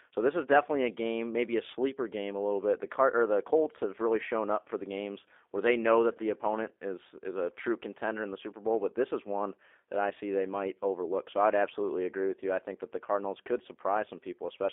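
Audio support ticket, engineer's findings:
G.729 codec on the speech path throughout, likely G.729A at 8 kbit/s judging by the sound. Speech rebuilt from filter, pitch predictor and sparse pulses. Band limited to 300 Hz to 3.5 kHz; plainly audible rough, synthetic texture.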